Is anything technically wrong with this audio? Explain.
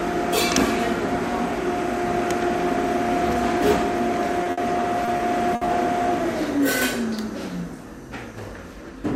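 Yes, there are three packet-loss problems, all clustered between roughly 4.4 and 5.7 seconds.

First, a short concealed packet loss at 4.43 to 4.47 s. About 20 ms of audio never arrived in time, so the receiver papered over the hole by extending whatever it was last playing, then cross-faded back into the real stream. You hear it as a tiny smear or wobble.

Right after, at 4.51 to 4.59 s, comes a burst of packet loss. This time about 60 ms went missing in one go. The concealment keeps stretching the last sound and pulls the level down as the gap drags on, so you get a brief held buzz or fading hiss. When playback picks up again, that 60 ms of material is simply gone.

Then from 5.05 to 5.69 s there's repeated packet loss, and it gets that robotic quality. Four separate gaps land in that stretch, adding up to about 120 ms, with the longest at 60 ms. That means roughly a fifth of the span is patched rather than real. 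Each hole gets filled by extending the previous sound, and the next one arrives before things settle. The result is choppy audio with chunks missing.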